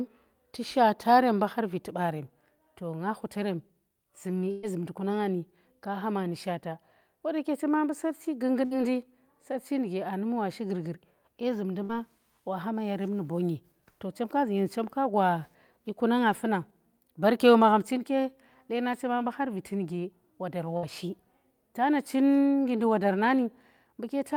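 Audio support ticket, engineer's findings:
Burst of packet loss at 4.51 s (before "zumndi ku"), 8.65 s, 11.83 s (after "shi gurgur dye zumndi", before "wa hama") and 20.77 s (after "har viti nuge wodar", before "shi tana"). About 60 ms concealed per event, 114 ms at 4.51 s. Receiver jitter buffer/concealment repeats the last sound, decaying into a buzz or hiss, then skips ahead. On a spectrogram this shows as smeared, repeated harmonics fading out, then a hard onset.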